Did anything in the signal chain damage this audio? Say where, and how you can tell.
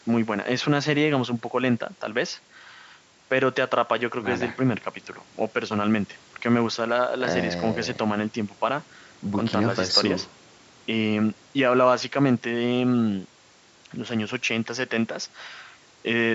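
No, nothing in the signal chain damaged this speech, and the call microphone processing that trims the lowest bass is working as it should.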